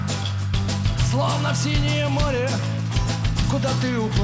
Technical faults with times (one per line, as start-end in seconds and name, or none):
none